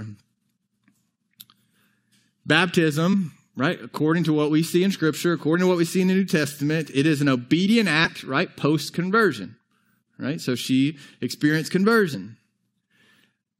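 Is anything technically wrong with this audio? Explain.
Yes. The speech briefly stutters forward four times: at 3.12–3.15 s, just before "right according to what"; at 5.54 s; at 8.05–8.09 s, between "it is an obedient" and "right post"; and at 12.13–12.18 s, after "she experienced". These are compressed frames skipped. Whole frames were missing or rejected as damaged, so roughly 20, 20, 50 and 70 ms of audio never play.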